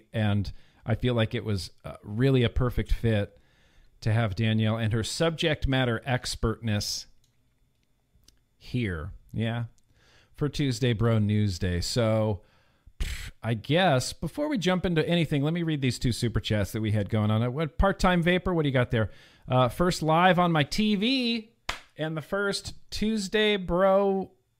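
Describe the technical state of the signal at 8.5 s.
At 8.5 s the speech signal is intact, with no dropout, clipping, glitch or other audible fault at that moment.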